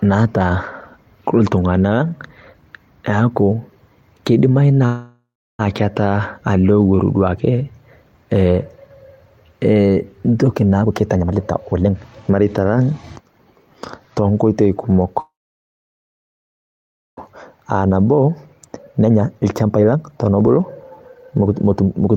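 From 4.85 to 5.61 s a call audio freeze stretches the last sound into a fading buzz, then 0.31 s of silence, likely from delayed packets emptying the jitter buffer. On a spectrogram this shows as smeared horizontal bands followed by a blank stretch.

From 10.82 to 13.67 s a jitter buffer speed-up trims pitch-period slices, removing roughly 0.7 s. The audio plays at 126% speed with unchanged pitch and sounds hurried. On the waveform, syllables appear visibly compressed in time.

From 15.20 to 17.19 s a second call audio freeze fills 1.98 s. A brief fading tail gives way to 1.86 s of silence, which appears as a long flat gap in the waveform.

From 17.53 s to the end, another jitter buffer speed-up runs at 125% and drops about a second. The pitch stays steady while the timing is tightly packed.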